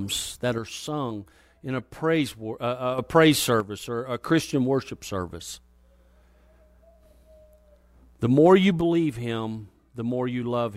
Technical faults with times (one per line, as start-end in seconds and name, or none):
0.58-2.98 one channel drops out
3.60-4.22 one channel drops out
8.81-10.77 one channel drops out